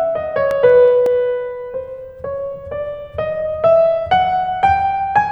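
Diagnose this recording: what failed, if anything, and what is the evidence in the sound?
CD scratch ticks, from 0.51 to 1.25 s, in the music: five short, evenly spaced ticks at roughly six to seven per second, the longest only a few milliseconds. This points to the storage and playback stage, a CD read. A scratch or blemish on the disc corrupted more data than the player's error correction could rebuild, once per revolution, so the player interpolated over or muted the damaged samples, leaving a tick on each turn.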